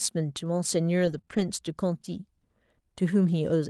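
From 1.05 to 1.19 s the speech turns rough and noisy without breaking off. This is a lost packet rebuilt from error correction. The stretch fits four packets that were replaced by the low-bitrate copies carried in the packets after them, about 80 ms in all. Unlike concealment, real content survives, only coarser.

At 1.21 to 1.25 s and again at 1.25 to 1.29 s come two short concealed packet losses. Each left a hole of about 20 ms. The decoder filled each hole by stretching the preceding sound, so it sounds like a smeared, wobbly continuation rather than degraded new material.

From 1.29 to 1.43 s a second error-correction rebuild follows, again about 80 ms of rough, noisier copies. Across all of this the call path is audible as Opus coding noise within a 12 kHz band.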